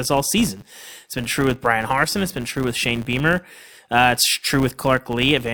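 A steady 100 Hz buzz rides under the speech for the whole clip, rising and falling with its level. This is a filter restarted on every block: it drops its state at each boundary and starts from silence, adding a transient every 10 ms.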